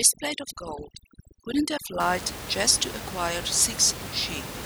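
Overdone noise removal runs from the start of the clip to 2.0 s. A noise reducer set far too aggressively pulls individual frequency bands down, or out entirely, whenever they sit close to its estimate of the room noise, and the softer parts of the speech vanish along with them. The background drops and breaks up into twinkling specks. After 2.0 s the room noise returns, about 11 dB below the speech.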